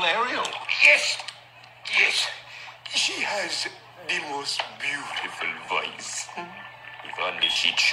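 You get three short dropouts from lost LE Audio frames: around 0.62 to 0.64 s (about 20 ms), 5.65 to 5.68 s (about 30 ms), and 7.52 to 7.56 s (about 40 ms). Each gap fits two, three, then four 10 ms LC3 frames going missing over the Bluetooth link. The decoder fills each hole by replaying the last spectrum with scrambled signs and fading it, so you hear a brief noisy smear rather than clean silence. The lossy compression underneath is light, leaving at most a faint watery texture.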